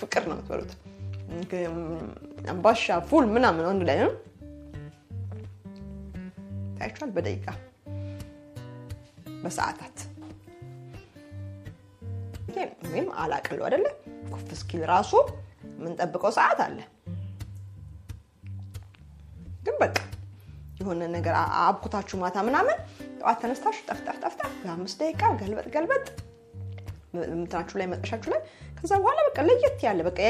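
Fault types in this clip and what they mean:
MP3 compression, throughout: the treble stops at a fixed ceiling and quiet detail flickers in and out, giving a watery, swirly texture with smeared attacks. This is likely lossy encoding starving weak frequency lines of bits, and the damage fits a bitrate around 64 kbps.
Damaged data in a compressed stream, at 12.48 s: a brief glitch interrupts the sound. Corrupted bytes made the decoder misread that stretch of the file, lose frame sync and skip ahead to the next valid frame header.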